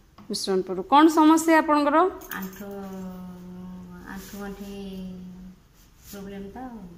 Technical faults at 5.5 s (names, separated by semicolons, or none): none